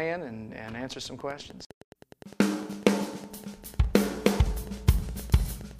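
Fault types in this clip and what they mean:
Train of clicks: A steady series of near-identical clicks runs from 1.20 s to 5.72 s. They arrive evenly, about 9.8 per second, roughly fifty in all. Each one peaks at roughly the level of the sound itself. The ticking carries through quiet gaps too. The regular pulse likely comes from interference from nearby equipment or a faulty connection or power supply injecting the same pulse over and over.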